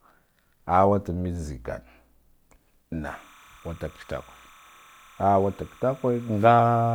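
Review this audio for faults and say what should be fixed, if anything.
Timecode bleed from 3.06 s to the end: a chirping warble alternating near 1 and 2 kHz, about 30 dB under the speech, consistent with 29.97 fps code. Its two-pitch flutter separates it from single-tone whine. Route timecode on separate, shielded cabling away from audio lines.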